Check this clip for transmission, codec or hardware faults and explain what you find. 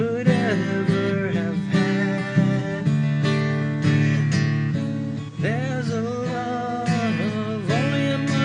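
Nothing stood out on listening to this clip.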